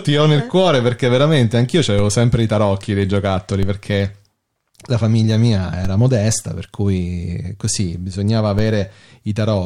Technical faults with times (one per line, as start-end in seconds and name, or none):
1.99 DC step
3.63 DC step
5.85 DC step
8.59 DC step